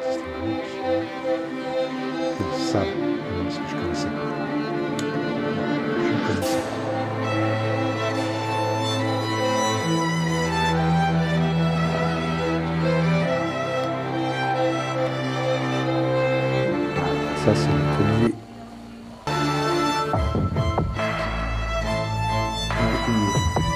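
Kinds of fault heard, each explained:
Loose connector crackle: a worn or dirty contact rapidly making and breaking, briefly chopping the signal into an irregular scratchy burst from 2.37 to 2.43 s, about 60 ms. The waveform shows jagged dropouts and spikes there; the spectrogram shows a short, ragged broadband smear.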